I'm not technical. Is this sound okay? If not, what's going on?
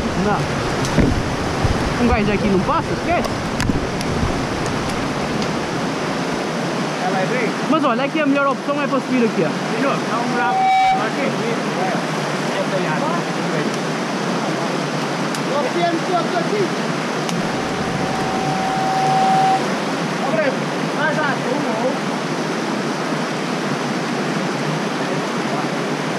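No. Loudspeaker feedback squeal appears twice, at 10.08 to 11.15 s and 17.10 to 19.64 s. A microphone re-hears its speaker, so a 763 Hz tone swells into a howl.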